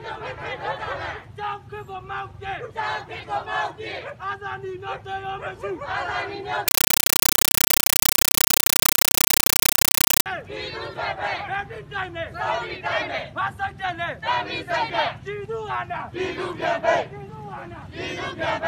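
From 6.68 to 10.26 s the sound gives way to very loud, chattering static: 8 ms noise bursts, each followed by silence, 31.25 times a second. This is a compressed stream played as audio, an undecoded Dolby Digital (AC-3) bitstream read as ordinary samples.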